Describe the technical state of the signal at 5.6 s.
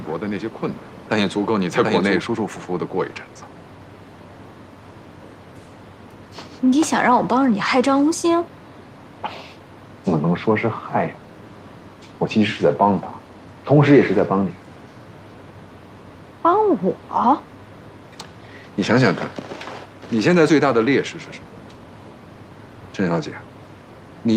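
At 5.6 s the signal is intact, with no dropout, clipping, glitch or other technical fault audible at that moment.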